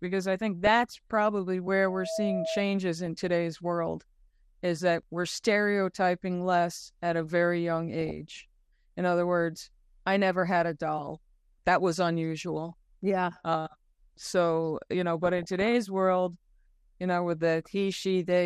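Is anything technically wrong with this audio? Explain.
Yes, there are three problems. Throughout the speech the sound is dull and plainly gurgling, with a granular edge on the voice. That points to MP2 compression, likely at a low rate around 80 kbps. MPEG Layer II divides the signal into 32 sub-bands and shares out bits among them. With so few bits, upper bands drop out and flicker, and the remaining bands are coarsely quantised.

DAB burbling appears four times:
from 0.64 to 0.95 s, just after "I think";
from 3.06 to 3.29 s;
from 8.01 to 8.11 s, after "at a very young";
from 15.24 to 15.85 s, after "so you know".

Each burst puts short blips of noise over the speech. These are reception errors that got past error correction into the MP2 data, so corrupted samples put short blips of noise in single sub-bands, and corrupted scale factors make sub-bands jump in level for up to a frame.

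From 1.86 to 2.65 s a loudspeaker feedback squeal rises. It is a single 649 Hz tone that swells over roughly a third of a second until it is about as loud as the speech. A microphone was hearing the loudspeaker it fed, and at 649 Hz the loop gain exceeded one, so that frequency grew on its own.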